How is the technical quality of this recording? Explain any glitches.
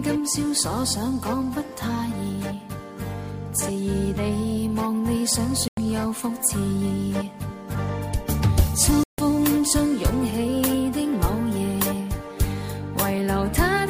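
The recording has two short gaps where the sound cuts out. At 5.68 to 5.78 s and again at 9.03 to 9.19 s there's a Bluetooth dropout, likely packets arriving too late and getting discarded. About 93 ms and 149 ms go silent, and the sound picks up further along as though it never paused.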